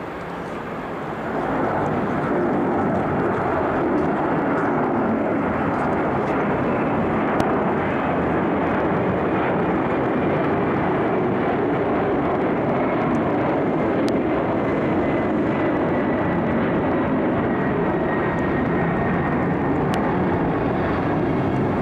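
A loud pop hits at 7.40 to 7.43 s, again at 14.09 to 14.11 s, and at 19.94 to 19.96 s. Each is a single sharp pop, about 15 dB above the sound, which continues underneath. A likely cause is a voltage spike from a switch or static.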